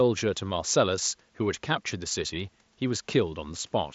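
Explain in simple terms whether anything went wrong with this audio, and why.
Nothing went wrong with this speech recording: the faint room noise sits far beneath the talking and belongs to the room, and the Bluetooth headset's mSBC link carries the sound up to about 7.7 kHz, as that kind of headset connection normally does.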